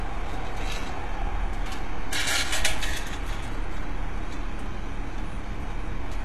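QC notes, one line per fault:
Throughout, HE-AAC compression: the audio has likely passed through a low-bitrate HE-AAC encoder, with damage plainly audible, which fits a stream of around 16 kbps. Only the lower band is truly coded; the treble is rebuilt by copying lower bands upward under a coarse envelope, so its harmonics do not line up with what sits below the crossover. The top end sounds gritty and metallic, and nothing is present above 12.3 kHz.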